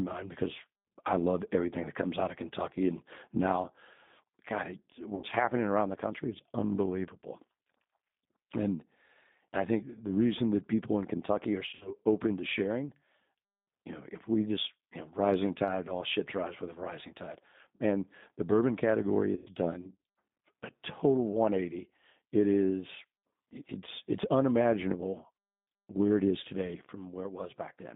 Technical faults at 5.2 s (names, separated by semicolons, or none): G.729 codec; VoIP packet loss concealed by the speech codec